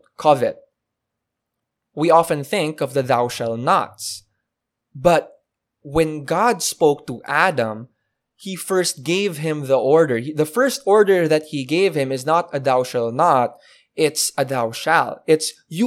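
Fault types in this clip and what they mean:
Bit error spike: one flipped bit in a single sample makes a broadband tick of about -16 dBFS after "often think of the", with no gap, unlike a dropout.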